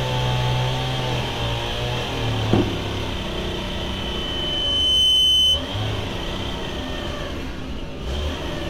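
Loudspeaker feedback squeal runs from 3.49 to 5.68 s. A 3 kHz tone loops from speaker to microphone and swells over about 1.5 s.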